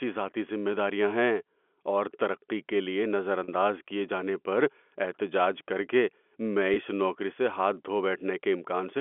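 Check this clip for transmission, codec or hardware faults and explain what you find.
There are two brief dropouts, both packet loss with pitch repetition, heard through a G.711 telephone-band line that cuts off at 3.4 kHz. The first runs from 3.44 to 3.48 s, about 40 ms, which fits two lost 20 ms packets. The second, at 6.74 to 6.76 s, is about 20 ms, which fits a single packet. In each gap the receiver loops the last pitch period to cover the missing audio, so you hear a short, slightly held, buzzy sound before things pick back up.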